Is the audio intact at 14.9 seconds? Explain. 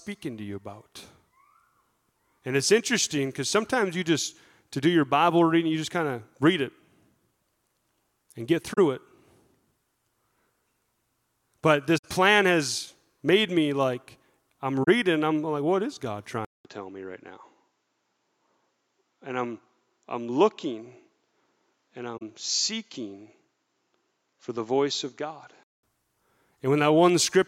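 No, not quite. Right after "made me like I'm", from 14.83 to 14.88 s, there's AAC frame loss with muting. The decoder zeroed the missing spectrum, roughly two frames' worth, so the overlapping windows fade the sound out and back in, leaving a soft hole before "I'm like what is".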